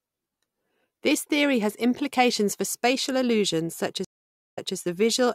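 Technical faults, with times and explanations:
4.05 to 4.76 s, stream reconnect: the connection dropped and the sound cuts to about 0.50 s of dead silence. Playback then resumes about 0.22 s earlier than where it broke off, so a short stretch of speech is heard twice. The fresh decoder starts with its first frame faded in. On a waveform this appears as a flat gap followed by a soft ramp; a spectrogram shows a blank band, then a repeated pattern.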